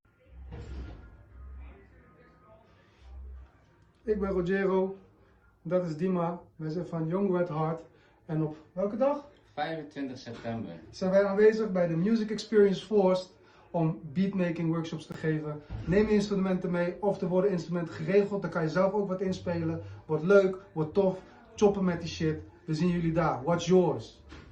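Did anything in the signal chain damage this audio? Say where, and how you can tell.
Yes: a roughly 20 ms hole from 15.12 to 15.14 s, likely a Bluetooth dropout at playback fitting one lost packet; the sound resumes time-aligned rather than delayed, unlike a buffer underrun.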